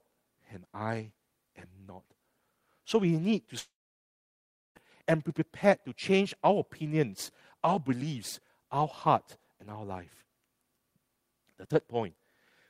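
From 3.59 to 4.78 s, after "we need to", a long network dropout, likely packets ceasing to arrive, cuts the stream. The final sound trails off as a short fading buzz, then 1.04 s of silence. The speech returns at "and be prepared to", with 1.16 s lost.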